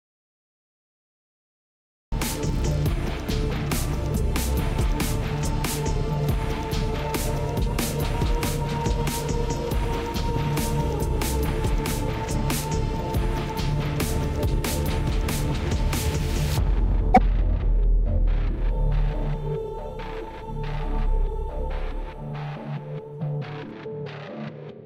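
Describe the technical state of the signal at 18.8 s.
At 18.8 s the audio is intact, with no technical fault to be heard at that point.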